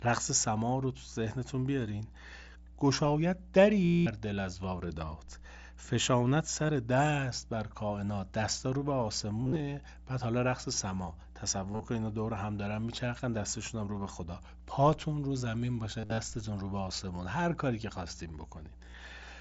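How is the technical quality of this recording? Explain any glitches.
Quality is compromised by a constant hum and repeated dropouts in the speech.

Mains hum runs throughout. A ground loop or nearby transformer leaks the 60 Hz power line into the signal. It is a steady low drone, only about 20 dB below the speech.

Concealed Bluetooth headset packet loss occurs at 3.85–4.06 s, 6.66–6.69 s, 9.43–9.60 s, 11.73–11.88 s, 16.00–16.18 s and 18.86–18.97 s. Packets between headset and phone went missing, and the receiver repeated recent waveform to fill the gaps. The 210 ms gap near 3.9 s holds a buzzy tone at full level. The brief gap near 6.7 s is nearly hidden. The later ones are scattered stutters with a slight warble. The mSBC wideband link itself carries speech up to 8 kHz with only light graininess.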